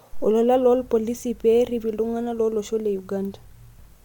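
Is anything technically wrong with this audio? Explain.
No, the recording carries no audible technical faults and the speech signal comes through intact.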